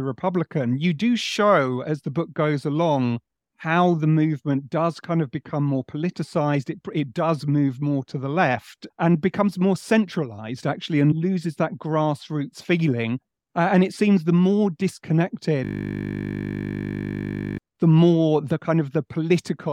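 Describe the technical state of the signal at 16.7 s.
A system hang loop runs from 15.65 to 17.58 s, covering the moment asked about. The computer or its audio driver stalled while the sound hardware kept replaying the last 20 ms chunk of its ring buffer, close to a hundred times in a row. Because the repeated piece is so short, the speech gives way to a steady, mechanical buzz at 50 Hz, the rate at which that chunk cycles, until playback resumes.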